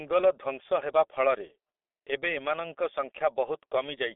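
From start to finish, this speech passes through a G.723.1 codec with heavy damage. The sound points to a rate near 6.3 kbit/s. The line band runs from 300 Hz to 3.5 kHz. Nothing above it survives. The codec works in long frames and refreshes its model of the voice slowly. Quick changes get smeared. The result is muffled and hoarse. Consonants blur together and lose their edges.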